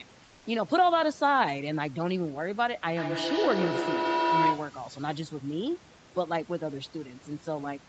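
Throughout the speech, overdone noise removal is audible: the suppressor is pulling individual frequency bands down hard wherever they sit near its noise estimate, so the background drops and breaks up into twinkling specks, and softer parts of the voice go with it.

From 0.23 to 0.45 s, a 220 ms stretch of the background is replaced by smooth, featureless comfort noise about 2 dB quieter than the real room sound, which itself sits about 31 dB below the loudest speech. The likely cause is Opus DTX halting transmission in the pause and the receiver synthesising filler.

From 2.97 to 4.88 s, a feedback howl builds around 1 kHz, with a loop delay of roughly 150 ms, as a microphone-to-loudspeaker loop gains level on each pass. It narrows to that tone and peaks about 1 dB above the speech before stopping.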